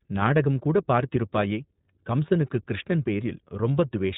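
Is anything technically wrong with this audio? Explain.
Yes. Throughout the speech, the sound carries the signature of the iLBC codec, a narrowband VoIP coder. Nothing above 4 kHz survives, and the voice has a plainly audible rough, synthetic edge, which fits the 15.2 kbps mode with 20 ms frames. Each frame's excitation is coded without relying on the previous one. A simple low-pass filter or narrowband resampling would remove the same top end while leaving the remaining voice smooth.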